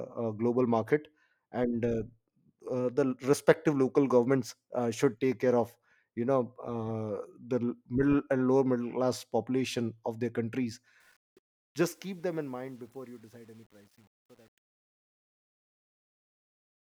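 Truncation distortion on the fade runs from 11.00 s to 16.97 s, over the fade-out that begins around 11 s and runs to the end of the clip at 17.0 s. The gain stage behind the fade keeps too few bits and adds no dither, which fits a word length of about 9 bits. As the level drops, the waveform collapses onto a few coarse square steps. From 11.89 s to 16.97 s the tail turns gritty.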